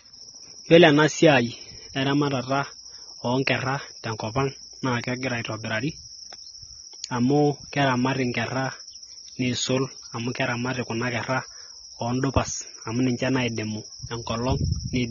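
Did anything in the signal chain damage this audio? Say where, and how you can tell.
Yes, and it's at the codec stage, running the whole way through this speech. There's nothing above 7 kHz, so the top end is just gone and everything sounds dull, and the sibilants and held vowels have that fizzy, warbly smearing you get when bands are starved of bits. That's likely AAC compression, AAC-LC squeezed hard enough that it dropped its cut-off, which fits a bitrate around 24 kbps.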